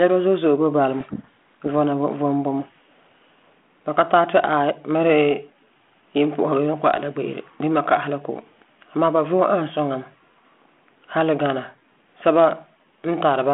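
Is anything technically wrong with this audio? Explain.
Yes. From 1.0 to 1.67 s, between "zo'e zo'e boi bala" and "vɔna vom vom bumɔ", a codec payload misread occurs: the G.726 code words are read with their bit order reversed, so the speech drowns in harsh distortion. On a spectrogram, broadband noise fills the 32 kbit/s G.726 telephone band; the waveform turns dense and jagged.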